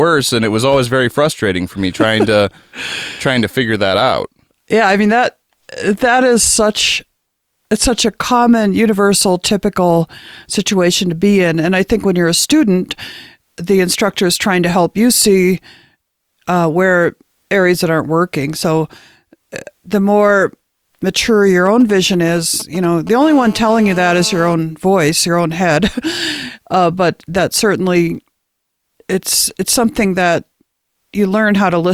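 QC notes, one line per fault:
21.66–23.24 s, GSM signalling bursts: a nearby 2G phone's short radio bursts, rectified by the audio circuit, give galloping dit-dit ticks and brief 217 Hz buzzes, roughly 20 dB below the speech.
23.24–24.54 s, GSM phone buzz: the phone moves into a call, and its continuous 217 Hz pulsing is rectified into a steady, raspy, harmonic-rich buzz about 18 dB below the speech.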